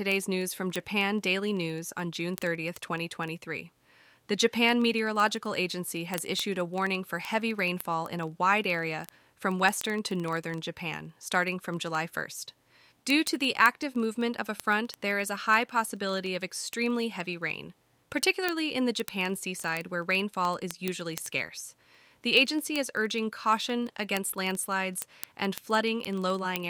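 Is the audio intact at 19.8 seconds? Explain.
No. Word clock ticks run from 0.12 s to 26.69 s, covering 19.8 s. An unlocked receiver slips one sample roughly every 0.04 s, suggesting a clock mismatch of about 500 ppm. Expect sharp, uneven ticks; spectrograms show evenly spaced thin vertical lines, waveforms single-sample glitches.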